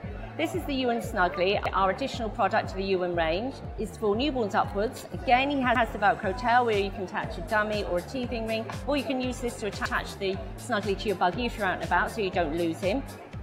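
Overlapping chunks at 1.66, 5.76 and 9.86 s: the audio was handled in 4-second blocks that each began 100 ms before the previous one ended, so that slice plays twice at every join, giving a regular stutter.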